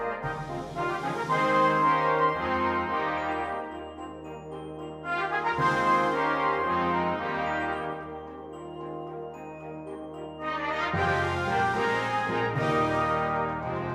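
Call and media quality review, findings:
Nothing to flag here; listened through and there's no audible issue anywhere in the clip.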